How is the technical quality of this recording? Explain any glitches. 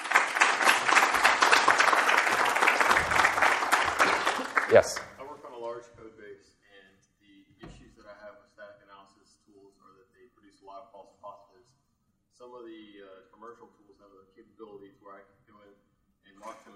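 There's one glitch, right at the start. From 0 to 2.0 s the adaptive stream is starting at a low bitrate: dull, smeary, nothing above about 13.2 kHz, consistent with 48 kbit/s MP3, then abruptly stepping up to roughly 128 kbit/s without a gap.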